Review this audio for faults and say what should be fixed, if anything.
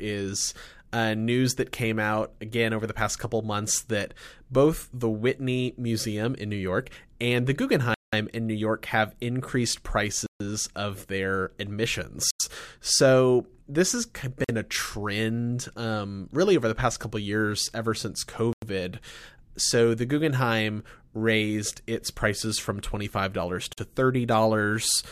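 The speech drops into a block of digital silence at 7.94, 10.26, 12.31, 14.44, 18.53 and 23.73 s, with gaps of 46 to 186 ms and hard, unfaded edges. The lengths are whole multiples of 2048 samples, which fits missed 2048-sample buffers. Give the audio thread more processing headroom.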